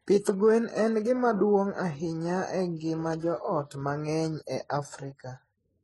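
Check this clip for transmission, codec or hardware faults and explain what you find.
One codec fault runs throughout this speech clip: transcoding between lossy codecs. Nothing sounds above 11.5 kHz. The stacked artefacts likely come from low-rate HE-AAC re-encoded to MP3, near 39 kbit/s.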